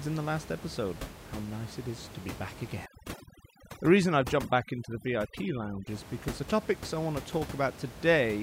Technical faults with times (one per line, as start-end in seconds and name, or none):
2.86-5.87 overdone noise removal